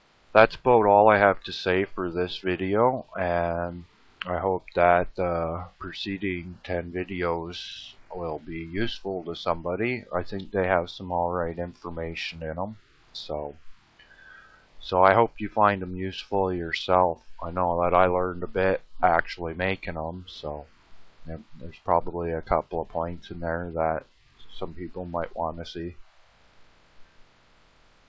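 No technical faults can be heard in the audio, which has passed through a working WebRTC call path whose band limit, with nothing above 8 kHz, fits a wideband G.722 codec running at 64 kbps.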